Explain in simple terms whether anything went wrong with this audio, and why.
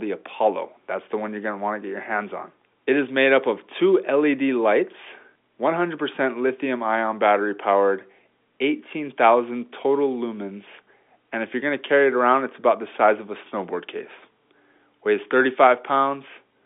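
Nothing went wrong with this speech recording: it carries the normal sound of an ordinary landline telephone call, where the G.711 telephone coding keeps only the band from about 250 Hz to 3.6 kHz and nothing above about 3.7 kHz, which is simply how phone audio is built to sound.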